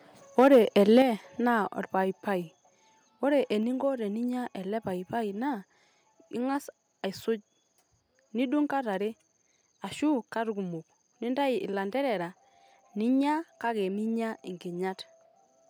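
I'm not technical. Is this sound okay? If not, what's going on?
No. From 0.38 to 1.02 s the loudest bits of speech crackle harshly. That's microphone overload, likely from the mic level being set so high the peaks got chopped off.

Then at 1.02 s everything suddenly gets quieter, voice and background together. That's the microphone volume stepped down, likely the call software turning the mic down after the distortion.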